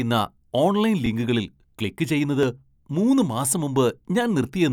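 At 1.06 s and 2.43 s the speech has a repeated buffer. New audio arrived late, so the last block of about 2.67 ms played again. It repeats twice, then once. The block size fits a 128-sample buffer. Each repeat sounds like a brief click.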